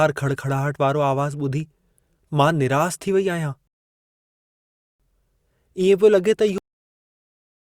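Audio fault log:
3.67–5.00 s, rebuffering stall: the speech halts into silence for about 1.3 s, then picks up exactly where it left off with nothing missing. Playback drained its downloaded audio and waited for more data to arrive, so the pause adds time without dropping content.
6.58 s, cut-off end: the speech stops abruptly mid-sound and falls straight to digital silence with no natural decay. The final stretch of audio was never written out or played, so the clip ends at an arbitrary point rather than at a pause.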